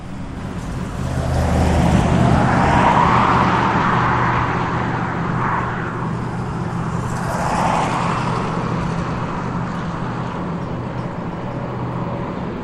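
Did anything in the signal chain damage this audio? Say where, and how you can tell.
Yes. The damage sits in the codec stage, in the compressed stream itself. At 0.36 s there is a brief blip, about 10 ms long. That is damaged data in a compressed stream. Some bytes in the file were lost or corrupted. The decoder misread the frames there and lost sync. It then hunted for the next valid frame header.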